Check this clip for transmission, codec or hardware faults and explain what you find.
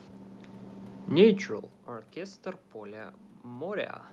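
No transmission, codec or hardware faults are audible here.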